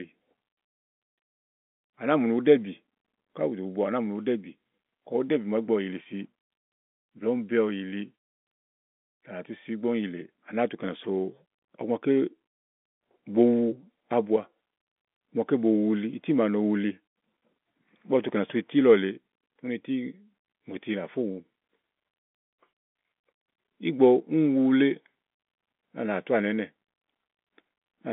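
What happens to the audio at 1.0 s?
Nothing goes wrong at 1.0 s: the speech passes intact there, carried on the ordinary telephone-band G.711 line.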